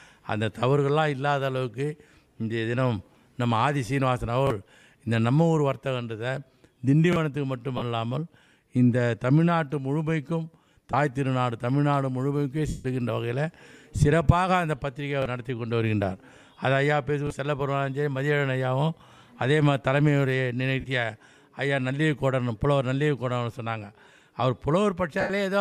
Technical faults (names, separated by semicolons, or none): lost LE Audio frames